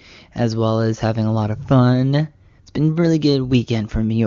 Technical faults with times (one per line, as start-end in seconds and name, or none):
none